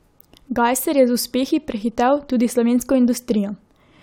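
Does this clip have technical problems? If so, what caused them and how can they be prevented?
No, nothing technical goes wrong anywhere in this speech recording, so there's no cause to track down and nothing to prevent here.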